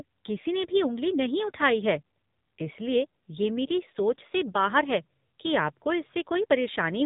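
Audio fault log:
Throughout: AMR narrowband mobile codec. The speech is cut off above about 3.8 kHz, and its buzzy, synthetic quality points to AMR-NB at a low rate such as 7.4 kbps. A spectrogram shows an empty band above the cutoff and smeared, blocky harmonics frame by frame.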